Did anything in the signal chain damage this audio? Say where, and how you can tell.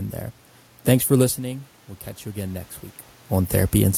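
Yes. Automatic gain rising in call processing from 1.46 to 2.77 s: after the input fell about 12 dB, gain climbed about 3 dB, lifting room noise with the voice, unlike a talker moving.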